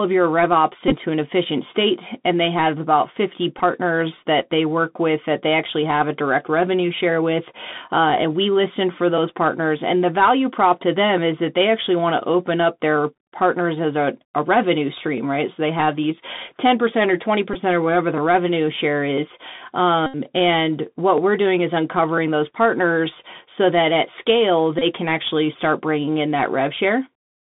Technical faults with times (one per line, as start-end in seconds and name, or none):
0.00-27.42 Bluetooth CVSD headset codec
0.88-0.94 Bluetooth headset packet repeated
3.58 Bluetooth headset packet repeated
17.54-17.56 Bluetooth headset packet repeated
20.06-20.16 Bluetooth headset packet repeated
24.79-24.83 Bluetooth headset packet repeated